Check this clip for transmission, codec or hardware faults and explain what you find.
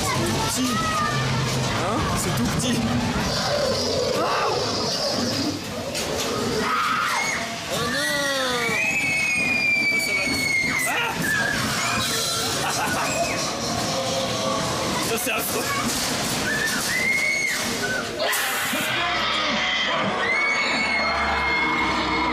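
No transmission, codec or hardware faults.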